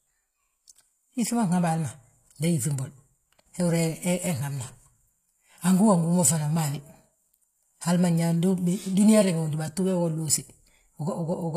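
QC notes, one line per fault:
Throughout, HE-AAC compression: s sounds are gritty and lispy, and the speech sounds bright but synthetic up to a cutoff near 14.9 kHz, likely from treble rebuilt out of copied lower bands. Unlike plain low-pass coding, the highs stay present rather than dull, which fits about 24 kbps.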